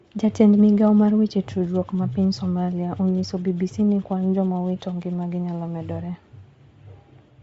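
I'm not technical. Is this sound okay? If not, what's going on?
No. The speech has a breathy, grainy edge from start to finish. Nothing is heard above about 7.7 kHz, so the sound feels dull and boxed in. This is likely Bluetooth LC3 compression, the codec used by newer Bluetooth earbuds and headsets. To save space, it throws away much of the high-pitched detail. It then fills the gap with soft noise. Here that damage is plainly audible.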